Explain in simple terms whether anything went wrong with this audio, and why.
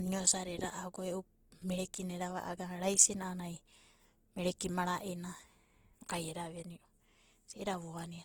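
Yes. From start to finish the speech sounds rough and grainy, a clear sign of Opus compression, likely from squeezing it into too small a file. Unlike MP3 damage, it swirls less and leaves fewer hollow gaps; the encoder fills thin spots with noise, so voices turn fuzzy rather than watery.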